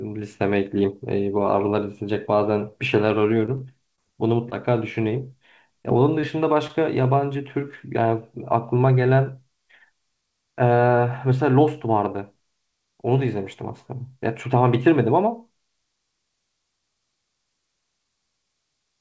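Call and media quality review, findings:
Scattered short gaps, 3.46–5.04 s: packets lost or late across this stretch on the call path, about five holes, none much over 20 ms, roughly 70 ms concealed in total. The jitter buffer's concealment extends the preceding sound, so brief ticks and small smears appear in otherwise continuous speech.

Short concealed packet loss at 5.83–5.86 s, 6.21–6.25 s and 6.67–6.71 s: a single packet of about 20 ms missing the decoder each time, filled from the last sound, then blended back. Each is heard as a short wobble or tick, and a brief consonant can drop out. The band stops at 8 kHz, which fits G.722 at 64 kbps on the WebRTC call path.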